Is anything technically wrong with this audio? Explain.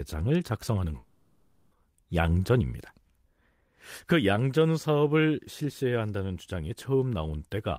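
Yes. From 0.97 to 1.73 s the speech turns into a fading buzzy smear and returns with that stretch gone, likely a long network dropout the receiver papered over.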